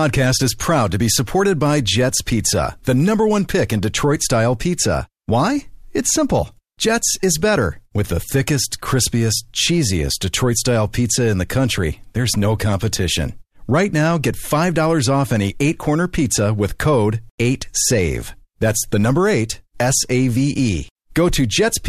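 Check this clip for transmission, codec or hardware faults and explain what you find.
No transmission, codec or hardware faults.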